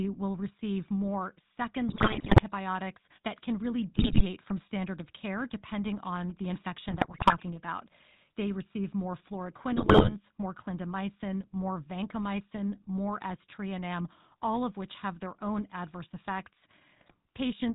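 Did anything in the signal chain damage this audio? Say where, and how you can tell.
Yes, at three stages.

Codec: throughout, the speech has the buzzy, gravelly roughness of the GSM full-rate codec, which fits 13 kbps full-rate coding. Nothing reaches above 4 kHz. On a spectrogram, the energy stops flat at 4 kHz, and the harmonics look smeared because the pulse excitation is coarse.

Network: GSM bit errors break the speech into squawks and gargling at 1.88–2.43 s after "will receive more", at 3.96–4.25 s between "that can really" and "from standard of care", and at 6.88–7.36, 9.76–10.15 and 16.96–17.15 s. Corrupted filter, pitch and gain values show as frame-long spectral smears and level spikes.

Analogue wiring: from 6.06 to 7.49 s, just after "standard of care depending", there is a galloping dit-dit-dit of short buzzes at 217 Hz, about 20 dB below the speech. These are GSM signalling bursts from a nearby 2G phone, rectified by the audio circuit. 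They show as clustered vertical ticks with a 217 Hz harmonic comb.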